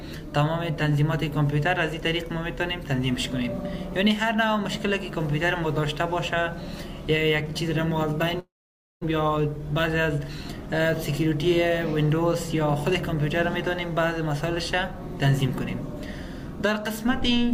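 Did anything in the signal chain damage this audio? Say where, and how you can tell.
Yes. From 8.39 to 9.05 s the sound stops arriving. What was last heard carries on as a fading buzz, sinks to silence, then resumes with roughly 0.4 s missing. That points to a long network dropout, likely, rather than a brief concealed packet loss, because the gap is far too long to bridge.

Jitter buffer speed-up follows at 9.15 to 10.19 s (about 7% fast) and 10.66 to 12.55 s (about 6% fast). Short pitch-period slices are cut repeatedly, trimming roughly 0.17 s in total. Timing hurries while pitch holds, which rules out a resampling error.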